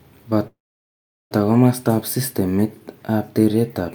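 Speech with a call audio freeze from 0.47 to 1.32 s: a short buzzy tail, then about 0.77 s of silence, likely packets stalling and draining the jitter buffer. Speech resumes where it stopped, nothing lost.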